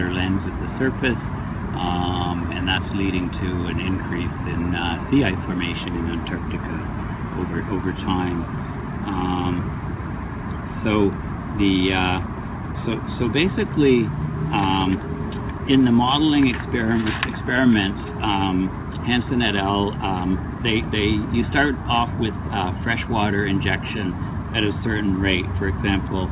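Nothing goes wrong anywhere in this audio; it simply carries the narrow telephone-style sound of a call path whose G.711 mu-law coding at 64 kbps leaves nothing above 4 kHz.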